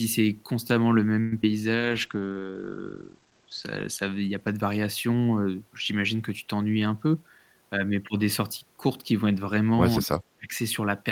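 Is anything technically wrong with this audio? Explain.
Yes, there are several faults.

From 1.20 to 1.33 s the sound smears into a fading buzz for about 115 ms, then resumes where it stopped. This is a call audio freeze, likely from delayed packets emptying the jitter buffer.

From 1.42 to 1.44 s a brief smear replaces about 20 ms of audio. This is short concealed packet loss: the decoder extrapolated the preceding sound to cover missing data.

From 1.76 to 4.90 s the sound turns rough and muffled, worst for about 1.6 s. This is a call bitrate drop from 32 to 15 kbps, which also narrowed the bandwidth from 20 kHz to 8 kHz.

From 6.76 to 7.63 s the speech hurries at about 112% speed while the pitch stays the same. This is a jitter buffer speed-up: the receiver cut about a tenth of a second in pitch-period slices to reduce the backlog.

At 9.99 to 10.12 s and 10.36 to 10.54 s the speech dips sharply, by around 35 dB and then around 25 dB. 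This is speech suppressed in double talk, likely because the echo canceller ducked the talker while the far end spoke.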